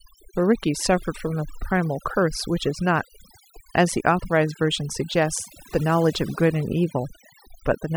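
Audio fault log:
Throughout: overdone noise removal. The noise reduction is set too hard, so frequency bands near the noise estimate are pulled far down or gated off, taking quiet parts of the speech with them. The background in the gaps drops and breaks up into twinkling specks.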